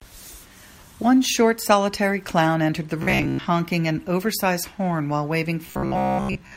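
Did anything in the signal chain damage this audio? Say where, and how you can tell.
Yes, robotic sound from repeated short buffers at 3.03–3.49 s and 5.66–6.56 s. A rigid 66.8 Hz buzz points to a starved buffer likely looping 15 ms chunks.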